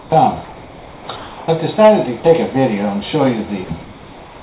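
From 0.00 to 0.12 s, 0.44 to 1.08 s, 1.16 to 1.48 s and 3.82 s to the end, the background turns into a smooth, featureless hiss, quieter by about 7, 3, 1 and 3 dB respectively. This is comfort noise in place of the background, likely from the sender pausing transmission while the receiver synthesised noise.

At 2.20 to 2.24 s and 3.64 to 3.70 s, about 20 ms and 30 ms of actual sound vanish into that same steady hiss. This is sound dropped by the voice detector, likely because it mistook those moments for background.

Throughout, nothing is heard above 4 kHz, consistent with a narrowband call path.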